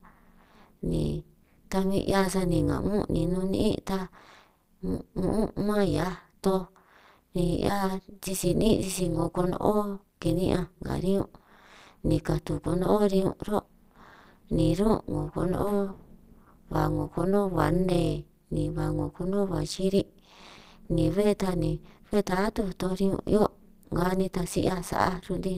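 Overlap-add ripple runs through the whole of this speech clip, from the first moment to the last. The audio has been split into windowed frames and rebuilt with an overlap that doesn't add up to a steady gain, so the level swings once per frame, dipping by about 60 dB at a rate of around 200 Hz. That deep, fast modulation gives the speech a harsh, metallic buzz rather than a gentle flutter.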